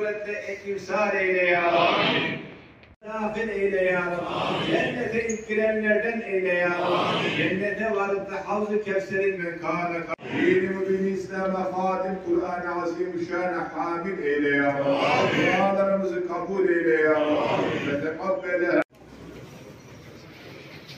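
From 9.38 s to the end, wrong sample rate: material recorded at 48 kHz plays as if it were 44.1 kHz. Everything slows to 0.919 of normal speed and drops about 1.5 semitones. On a spectrogram, harmonics and formants sit lower, and waveform features stretch out in time.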